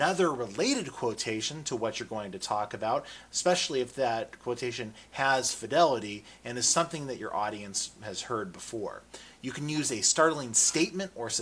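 No technical faults are audible.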